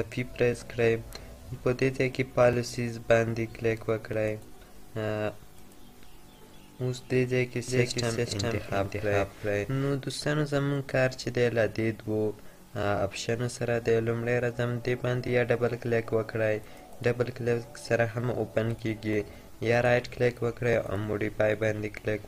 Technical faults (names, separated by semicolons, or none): doubled audio track